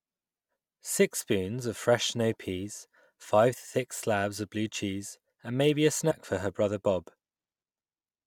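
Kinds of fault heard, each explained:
Compressed frames skipped: between "cheese and maybe a" and "for her brother", at about 6.1 s, the speech lurches forward with a short smeared blip instead of a clean join. Roughly 70 ms of audio never plays, consistent with about three frames of around 21 ms each being lost from the file or discarded by the decoder as damaged. Because adjacent frames overlap, the gap closes as a brief smudge rather than a sharp click.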